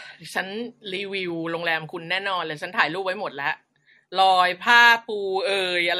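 Generation loss runs through the whole of this speech clip. The sound is swirly, smeared and hollow, with blurred attacks and nothing above 16.5 kHz, which points to a low-rate MP3 chain of around 64 kbit/s. The likely cause is repeated lossy encoding, perhaps five or so passes. Each decode and re-encode quantises the signal again on a shifted frame grid, so noise and spectral gaps pile up beyond what one pass would leave.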